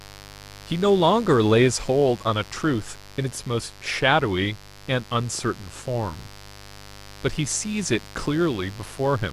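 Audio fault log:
throughout, mains buzz: a steady, raspy 50 Hz buzz with harmonics into several kHz sits roughly 20 dB under the speech; its sharp spikes, unlike hum's smooth tone, betray switching interference.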